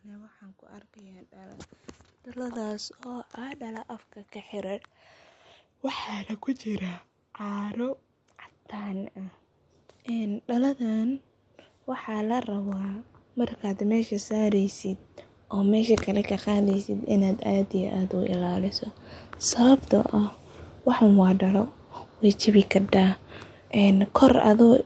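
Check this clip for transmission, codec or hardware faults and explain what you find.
One fault is present: a slow level rise from automatic gain control.

Automatic gain rising runs from 0.05 s to 18.75 s. The gain stage judged the input too quiet and kept raising its gain, lifting the speech and the background together by about 26 dB. The result is a gradual swell across most of the clip.

The absence of content above 8 kHz is the normal bandwidth limit of the call path, consistent with wideband Opus at around 32 kbps.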